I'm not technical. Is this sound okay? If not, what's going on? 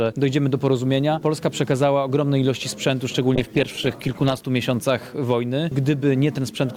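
No. A call bitrate drop runs from about 3.36 to 4.45 s. The connection's estimated capacity fell, so the encoder squeezed the sound into far less data for about a second. That coarser coding makes the audio sound rough and muffled until quality recovers.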